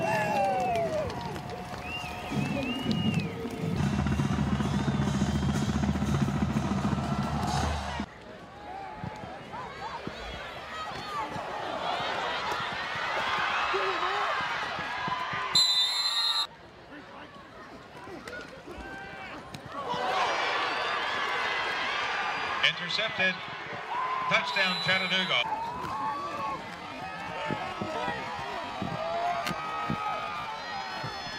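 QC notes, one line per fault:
26.68–31.39 s, time-stretched section: from 26.68 s to the end the pace drops abruptly to about 0.52 times normal speed, roughly half, while pitch stays unchanged. The likely cause is software lengthening this stretch to fill a target duration by repeating short overlapping segments rather than resampling. The slowed pace with steady pitch makes it drag, which marks it as a pitch-preserving stretch rather than a tape-style slowdown.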